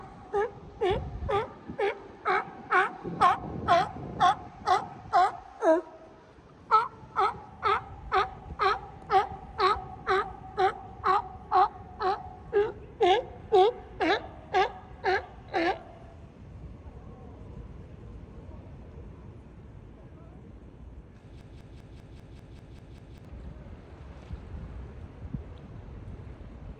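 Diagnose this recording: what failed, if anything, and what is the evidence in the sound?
A broken-record loop runs from 21.41 to 23.25 s. A fragment of about 197 ms repeats exactly, back to back, nine times. The likely cause is a stalled player, encoder or stream resending its last held fragment. The audio due in that span is lost.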